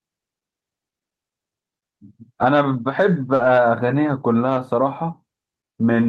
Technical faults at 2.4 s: lost packet rebuilt from error correction

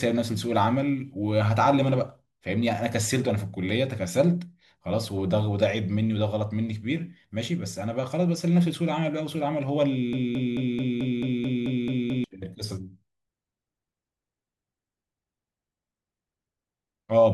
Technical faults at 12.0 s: broken-record loop

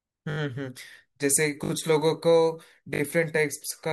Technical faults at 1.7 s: repeated buffer

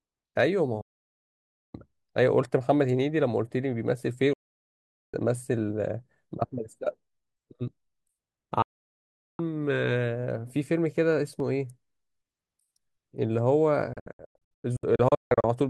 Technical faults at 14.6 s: digital broadcast dropout

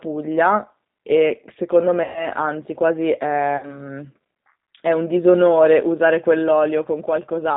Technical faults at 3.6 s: G.729 codec; VoIP packet loss concealed by the speech codec

